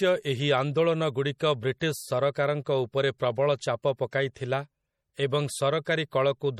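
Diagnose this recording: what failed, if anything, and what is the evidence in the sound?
The whole clip carries plainly audible codec damage, with nothing above 16.6 kHz. That points to a codec stage, likely MP3 at a low bitrate, something like 48 kbps. Starved of bits, the encoder drops weak frequency lines frame to frame and cuts the top end.

At 4.11 s there's pre-echo, also a codec-stage problem: about 17 ms of hiss smeared ahead of an attack. The transform spreads quantisation noise across the whole block, so noise sized for the loud onset leaks into the quiet moment just before it.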